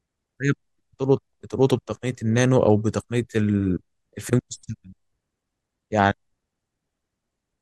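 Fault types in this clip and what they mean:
No fault types are present in this clip.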